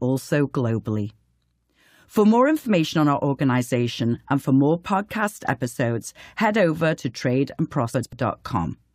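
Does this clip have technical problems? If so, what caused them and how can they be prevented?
Yes. Frames out of order at 7.93 to 8.13 s. Two neighbouring blocks of about 93 ms were decoded in swapped order. The speech flutters, but no time is lost. Numbering frames and reordering them before decoding prevents this.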